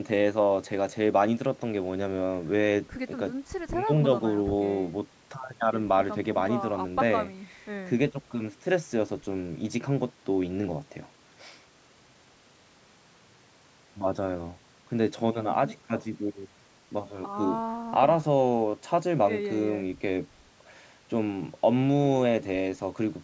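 Nothing stood out on listening to this speech, which carries the ordinary sound of call microphone processing, with its lowest bass trimmed and nothing above 8 kHz.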